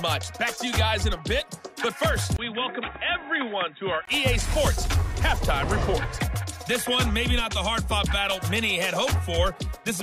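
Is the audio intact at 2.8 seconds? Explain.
No. From 2.36 to 4.07 s the sound turns dull and boxy, with nothing above 3.8 kHz, a level drop of about 5 dB, and a new, faint background noise roughly 45 dB under the signal. A gap of about 20 ms marks the change at 2.36 s. This is likely an input switched to a poorer device, such as a narrower-band microphone or headset profile, which brings its own bandwidth, tone and noise.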